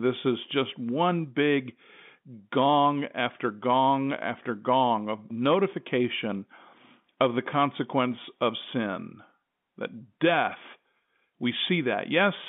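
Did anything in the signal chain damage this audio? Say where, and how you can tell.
No, nothing in the signal chain stood out as damaging this speech on listening.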